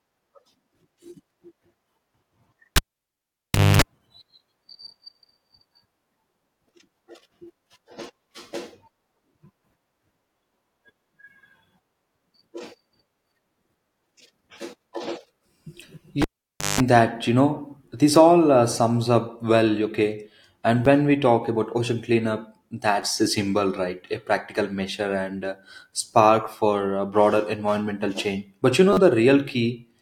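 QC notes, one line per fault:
2.76–3.82 s and 16.22–16.80 s, cable pulled and plugged in: each event starts with a pop and drops to near silence, for about 1.0 s the first time and about 0.54 s the second, ending just before "that you know this". Next comes a burst of 50 Hz mains buzz, 0.25 s and 0.18 s long, while only the plug tip makes contact, then a second pop as the sound returns. The mains buzz and the pop at each end are what separate this from a plain dropout.
20.85 s before "when we talk", 23.02 s before "a symbol", and 28.93–28.97 s, repeated buffer: fresh audio came late, so the device played the last 10.67 ms chunk again, which fits a 512-sample buffer. The first two events repeat once. The third repeats four times over about 40 ms. There is no silence gap or mains hum, so this is not a cable fault.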